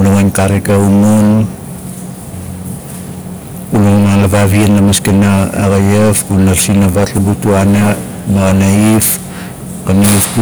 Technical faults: hard clipping

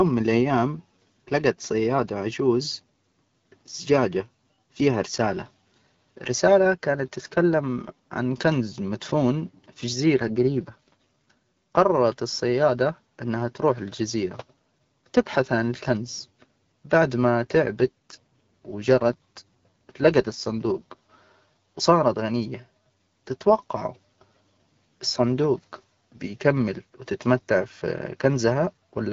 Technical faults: AMR rate drop

